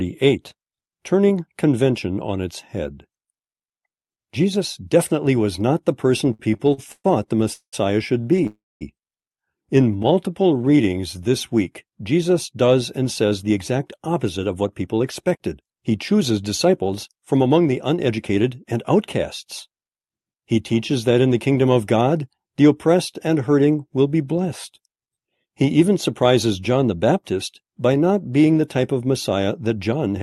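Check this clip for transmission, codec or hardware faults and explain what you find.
Several jitter-buffer faults from packet timing in the call chain appear in the first 19 seconds and again at the very end. The audio tops out near 12 kHz, which fits an Opus call path.

From 6.33 to 8.47 s, just after "was not the person", there are repeated stalls (stutter). Packets reached the receiver late eleven times, and each time the buffer emptied and the last sound was stretched to fill the wait. About 0.49 s is filled in this way, roughly a quarter of the span, and the longest hold lasts 193 ms. Nothing is lost, but the speech drags and hiccups. On a spectrogram you would see short smeared, repeating bands where formants freeze. The waveform shows looped cycles with fading tails.

From 8.47 to 8.83 s the audio freezes. A 340 ms hold begins with a fading continuation of the last sound and then falls to about 210 ms of silence before speech resumes where it stopped. 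The likely cause is packets stuck in transit until the buffer ran dry, which added 340 ms of delay. The spectrogram shows a decaying smear ending in a blank gap. The waveform shows a tapering envelope followed by a flat line.

From 9.91 to 11.29 s there is a jitter buffer slow-down. The buffer was building back its reserve, so the receiver repeated single pitch periods and slices of pauses, adding 169 ms. Speech plays at about 88% speed with the pitch unchanged, so sounds are drawn out, sometimes with a faint warble. Spectrogram harmonics stay at the same height but stretch in time. The waveform shows near-identical cycles repeated back to back.

Jitter buffer speed-up occurs from 13.24 to 18.73 s, after "does and", and again from 29.70 to 30.07 s. Too much audio had piled up in the buffer, so the receiver cut out pitch-period-sized pieces: roughly 0.4 s in the first stretch and a few tens of milliseconds in the second. 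Speech runs at about 108–109% speed at the same pitch and sounds hurried. On a spectrogram, syllables look compressed in time with unchanged harmonic spacing. The waveform shows small discontinuities where cycles were removed.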